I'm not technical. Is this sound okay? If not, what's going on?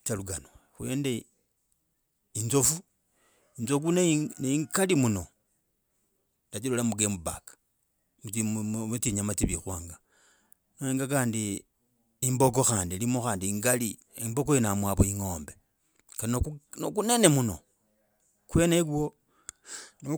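Yes, there's no technical problem to hear here.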